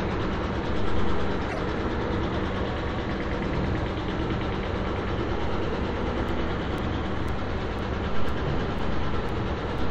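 A short everyday sound recording stutters between 1.48 and 1.59 s, where a 26.1 ms slice is heard three times in a row. These are repeated frames: one compressed block, whose length fits a typical MP3 frame, was written or delivered twice more than it should have been, so the decoder replayed it and stretched the clip by 52.2 ms. From 6.28 s to 9.79 s a regular tick appears every 0.5 s, about seven in all. Each is a gap of roughly 4 ms where the sound drops briefly to silence. These are periodic USB or driver dropouts. Some background process stalls the audio path at a fixed interval, and the samples due during each stall are lost and replaced with silence. The evenly spaced ticks in this stretch point to that timed interruption.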